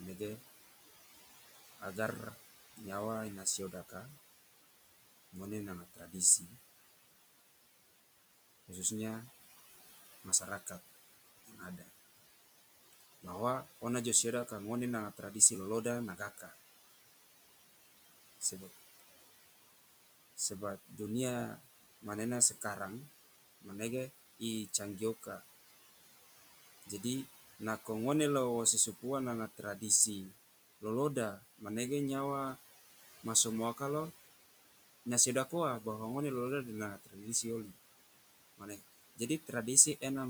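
Noise suppressor artifacts run through the whole of this speech recording: the room noise, sitting about 15 dB below the voice, is pushed down by about 15 dB whenever nobody is talking, then surges back up underneath the speech, because the suppressor re-estimates each frequency band frame by frame. Speech cut by the noise suppressor occurs in four stretches, from 1.8 to 6.54 s, 10.41 to 16.54 s, 18.41 to 33.8 s, and 35.47 to 40.03 s. In each stretch the suppressor mistakes quiet parts of the speech for background and turns them down together with the noise, by as much as about 13, 12, 14 and 16 dB respectively. Only brief pieces are affected, roughly half a second in most stretches and closer to three quarters of a second in the long middle one. They come through swallowed or faint.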